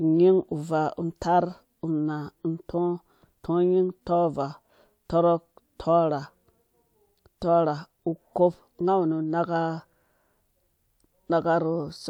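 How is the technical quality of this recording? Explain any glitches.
No audible glitches or faults.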